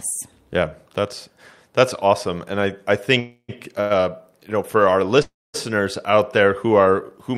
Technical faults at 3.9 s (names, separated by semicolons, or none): short stall from a late packet